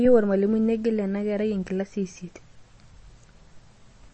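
Throughout, the speech carries plainly audible damage, likely from MP3 compression at a low bitrate near 32 kbps. Nothing remains above 8.3 kHz, and the sound is watery and swirly.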